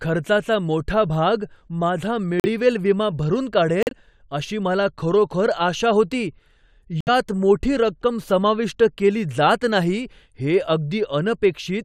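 At 2.40, 3.83 and 7.01 s the speech drops into abrupt silent gaps of about 0.06, 0.10 and 0.08 s: corrupt frame muted, where damaged compressed frames were rejected and replaced by silence. Waveform and spectrogram show sharp-edged blank holes, with timing preserved.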